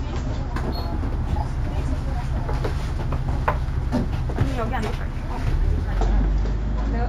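From 0.53 to 6.01 s the top end sounds dulled, with a faint metallic shimmer on bright sounds. This is imaging from linear upsampling. Straight-line interpolation left mirrored copies of the spectrum between 8 kHz and 16 kHz, roughly 40 dB down, which points to a 16 kHz source raised to 48 kHz.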